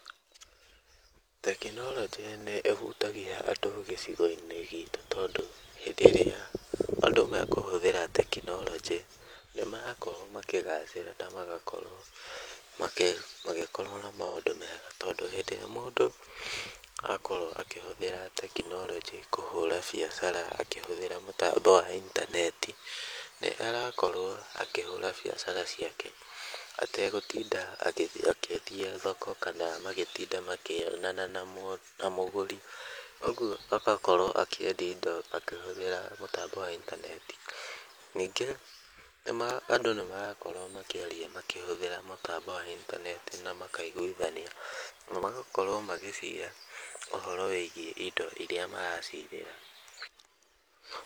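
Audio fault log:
0.17–50.96 s: periodic USB or driver dropouts. Regular ticks every 0.249 s, as a blocking background task makes the driver skip about a millisecond of audio each time.
14.26–14.37 s and 49.21–49.25 s: AAC frame loss with concealment. Smeared, noisy patches where the decoder rebuilt two lost frames (85.3 ms), then one (42.7 ms), from earlier spectrum.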